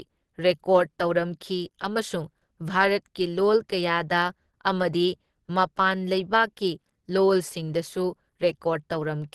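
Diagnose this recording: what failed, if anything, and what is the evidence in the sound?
Opus compression, running through the whole recording, is the likely culprit at the codec stage. The speech has a hard ceiling at about 12.2 kHz and plainly audible codec damage: a muffled, hoarse quality with grainy, noise-filled texture. That points to the encoder's hybrid speech mode at super-wideband bandwidth, which fits a low bitrate of around 16 kbps. Short of bits, the encoder discards everything above about 12.2 kHz and substitutes noise for detail.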